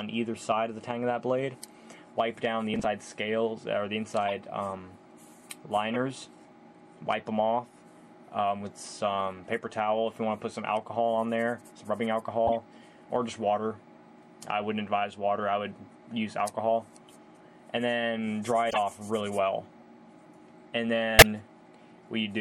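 MP3 compression runs through the whole clip: the top end is cut off sharply and faint detail flickers in and out, giving a watery, swirling quality with metallic chirps on bright, noisy sounds and softened attacks. The likely cause is a low-bitrate MP3 encode. The damage fits a rate around 64 kbps, where the encoder runs short of bits, drops the treble and zeroes weak frequency lines that switch on and off from frame to frame.

Processor overload crackle comes from 2.74 to 2.85 s, a short gritty tearing over the sound. The processor fell behind and missed around ten audio buffer deadlines in a row. Nothing was played in their place, so each miss became a hard-edged skip. The spacing suggests buffers of roughly 10 ms, and the tearing stops as soon as the load eases.

Corrupt frame decoded faults occur at 4.28 to 4.34 s, 5.92 to 5.96 s, 12.47 to 12.52 s, 18.69 to 18.78 s, 19.80 to 19.82 s and 21.18 to 21.26 s. 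Each is a brief chirp or burst of noise lasting about one to four frames. Damaged bits in those frames were decoded anyway, so misread gains and codes put energy at the wrong frequencies. The last burst peaks near -5 dBFS and is the loudest. The one at 19.8 s, near -45 dBFS, is barely a blip.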